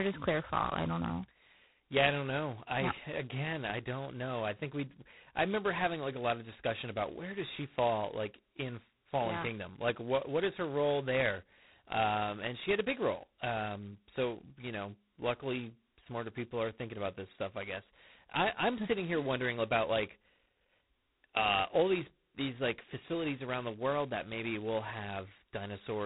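Throughout, heavy G.726 ADPCM coarsely quantises prediction error, giving a rasping hiss that tracks speech level and fits 16 kbit/s. The spectrogram shows noise-filled bands and nothing above 3.9 kHz.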